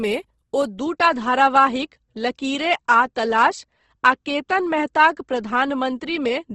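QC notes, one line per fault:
throughout Opus compression: the speech sounds grainy and rough, with a noisy fizz in the upper bands and nothing above 12 kHz. This is likely Opus in its music mode filling starved bands with noise or folded content, which fits roughly 16 kbps.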